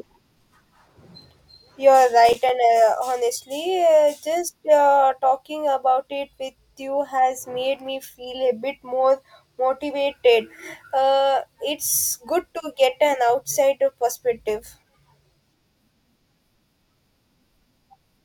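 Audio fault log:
2.29 to 2.49 s, processor overload crackle: for about a fifth of a second the speech breaks into a short burst of gritty crackle. The processor falls behind and misses several buffer deadlines in quick succession, and each missed slot is filled with silence. The result is a string of tiny dropouts with hard edges, which fits buffers of around 5 ms with a handful of them lost. The crackle stops once the load eases.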